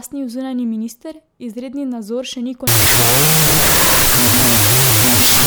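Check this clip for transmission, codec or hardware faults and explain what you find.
There's one fault, a wrong sample width, running from about 2.67 s, just after "izredni nadzor še ni", to the end of the clip. The speech was stored as 32-bit float but gets read as 16-bit integer, so every sample splits into two integers. That doubles the sample count, which plays back at 0.5x speed, an octave down. The half-words are mismatched bytes, mostly exponent and mantissa scraps, so you get loud harsh noise with the slowed speech faintly buried underneath.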